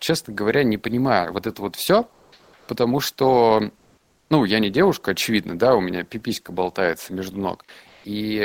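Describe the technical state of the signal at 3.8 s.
At 3.8 s, the faint background between "вот все потому что" and "ну я не девушка" turns into a flat, textureless hiss, shifting in level by about 4 dB, from 3.77 to 4.30 s (roughly 530 ms). This is comfort noise in place of the background, likely from Opus DTX: the sender stopped transmitting during the pause, and the receiver filled the gap with synthetic noise roughly matched to the background, losing its real detail until the speech resumed.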